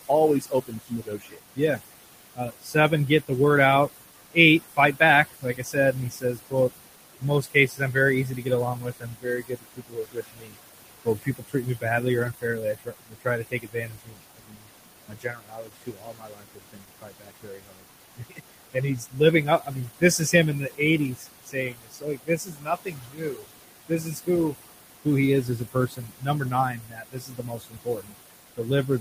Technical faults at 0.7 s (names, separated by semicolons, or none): noise suppressor artifacts; speech cut by the noise suppressor